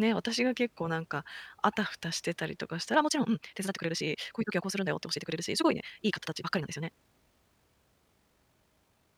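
At 2.92 s the speech abruptly picks up pace and stays rushed to the end of the clip, running at about 1.86 times its earlier rate while the pitch holds steady. This time-stretched section sounds rushed. The likely cause is software compressing the audio to fit a shorter length, preserving pitch by discarding short slices of the waveform and splicing the remainder together.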